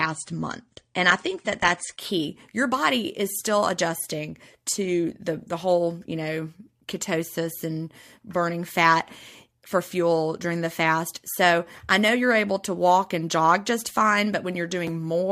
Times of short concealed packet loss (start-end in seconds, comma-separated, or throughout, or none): none